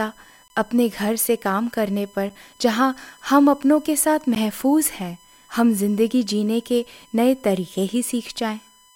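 USB whine runs through the whole of this speech recording as a steady 1 kHz tone, roughly 35 dB below the speech. Current drawn by the USB bus in 1 ms frames leaks through the power or ground into the audio path, giving this fixed pitch. Blocks of digital silence occur at 0.48 to 0.50 s (20 ms), at 2.29 s (about 6 ms) and at 4.35 s (about 13 ms). The signal drops abruptly to silence and returns without a fade, so each gap sounds like a tick or short hole, which points to the output buffer not being filled in time.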